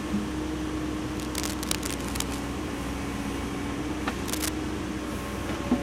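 Bursts of dense, uneven scratching and rustling cut across the sound from 1.17 to 2.39 s, sitting a little below its level, and return more briefly from 4.25 to 4.49 s at roughly the same loudness as the sound itself. This is cable scratch noise, likely from a worn cable, connector or control being moved, so that its contact resistance jumps around rapidly and sprays irregular noise into the signal while it shifts.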